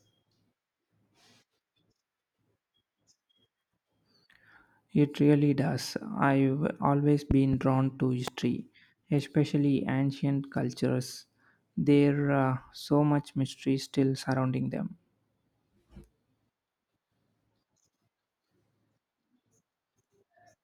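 Loud pops at 7.31 to 7.56 s, a quick double just before "drawn to", and 8.28 to 8.30 s after it, about 15 dB above the speech; likely voltage spikes, from a plug, switch or static, riding over the ongoing speech.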